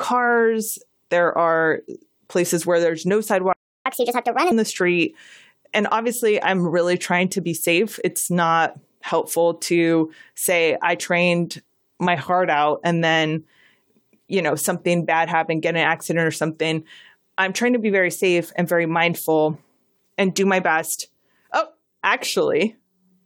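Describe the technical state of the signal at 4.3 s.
At 4.3 s the player is in catch-up at higher speed (3.86–4.52 s), resampling its backlog 1.5 times faster. Pitch rises about seven semitones, and the spectrogram shows harmonics shifted upward and time-compressed.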